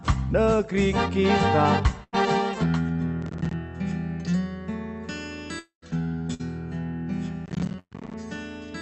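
The audio arrives over a call link whose codec limits it to about 8 kHz of bandwidth, and several delivery faults break into it. A burst of packet loss strikes three times, at 2.03 to 2.15 s, 6.34 to 6.41 s and 7.79 to 7.93 s. Each time, runs of packets fail to arrive in time, and the receiver extends the last sound for roughly 90, 50 and 120 ms as a fading buzz or hiss. About 80, 60 and 120 ms of the original go missing. In the third burst the fill decays into about 50 ms of silence before the audio resumes further along. Processor overload crackle appears from 3.22 to 3.53 s and again from 7.46 to 8.14 s, overlapping the last packet-loss burst. Here the processor falls behind on short buffers, which fits buffers of around 10 ms, and misses about fifteen deadlines in the first stretch and roughly forty in the second. Each missed buffer drops out as a hard-edged sliver of silence, and the rapid chain of these produces a gritty, tearing crackle over the sound until the load eases. 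From 5.59 to 5.84 s the sound is carried on for about 230 ms as a fading buzz or hiss that ends in about 120 ms of silence, and the audio returns with about 240 ms gone. This is likely a long network dropout, a stretch in which no audio reached the receiver at all.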